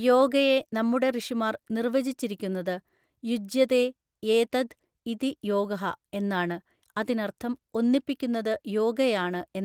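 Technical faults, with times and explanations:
No technical faults heard; the speech carries light Opus voice compression whose full-band hybrid coding fits a rate around 24 kbps.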